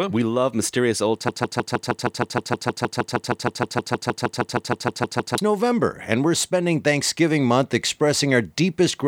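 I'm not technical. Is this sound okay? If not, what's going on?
No. From 1.29 s to 5.38 s the speech gets stuck in a broken-record loop: one tiny piece, about 0.16 s long, plays again and again, 26 times back to back, like a scratched CD. The likely cause is that the player or stream froze and kept resending the last bit of sound it had. Whatever was said during those four seconds is missing, and normal speech resumes afterward.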